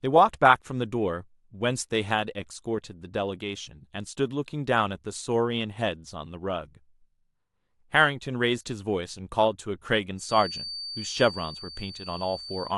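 From 10.15 s to the end of the speech, a feedback whistle sits behind the sound: a thin, steady tone near 4.6 kHz, some 15 dB below the speech, swelling and fading slowly in level. The likely cause is a loudspeaker-to-microphone loop held just at the edge of feedback, so this single frequency keeps ringing without building up. Unlike a runaway howl, it never builds into a howl; unlike mains hum, it is a high, lone pitch with no low buzz or harmonics.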